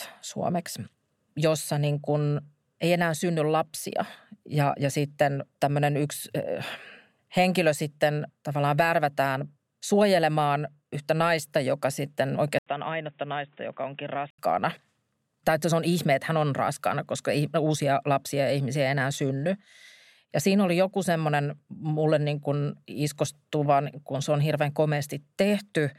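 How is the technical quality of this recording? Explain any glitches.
There's one clear glitch in this speech recording. Right after "yhtä naista joka sitten", from 12.59 to 14.38 s, an 80 ms gap opens and the sound goes dull and boxy, with nothing above 3.8 kHz. It also drops by roughly 10 dB and picks up new background noise about 35 dB down. That's most likely the input switching to a poorer device, a narrower-band device with its own level and noise floor.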